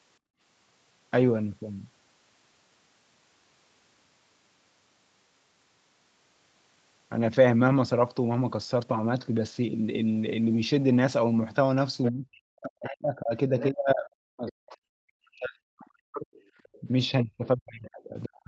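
At 0.19 s the echo canceller clamped down on the microphone while its loudspeaker was active, producing background gated by the echo canceller. From 0.19 to 0.4 s the room sound sinks by about 27 dB, a brief hole in the ambience lasting about a fifth of a second, before the canceller releases and the background returns at its normal level.

Around 12.04 to 12.12 s the canceller likely failed to strip the far end's loudspeaker signal from the microphone, so the other side's voice is leaking through as a scrap sitting roughly 10 dB below the main speech. Further leaks come at 13.59 to 13.70 s, 14.48 to 14.52 s and 16.64 to 16.80 s, each quieter than the last, the final one at around 30 dB down.

From 12.11 to 16.29 s, both sides were likely talking at once, and the canceller, unable to tell the local talker from the echo, turned everything down: speech suppressed in double talk. For about four seconds the talker's speech dips by as much as around 40 dB. 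A short dip of about 15 dB follows at 16.81 to 16.88 s, and from 17.23 s to the end the speech is pushed down deeply again. Throughout, the call's microphone processing caps the band at 8 kHz.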